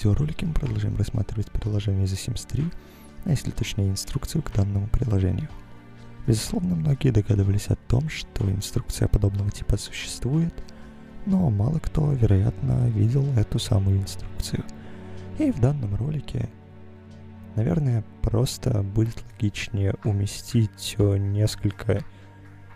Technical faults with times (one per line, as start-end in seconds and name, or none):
none